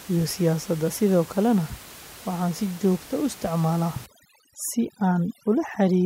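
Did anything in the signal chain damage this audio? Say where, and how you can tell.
Yes. From 4.06 s to the end at 6.06 s, the call-processing stage applies overdone noise removal. The room noise, sitting about 20 dB below the speech before that point, drops and breaks up into twinkling specks. The suppressor is cutting individual frequency bands it judges to be noise, taking quiet speech detail with them. Unlike a codec's low-pass dulling, the damage flickers band by band and tracks the noise floor.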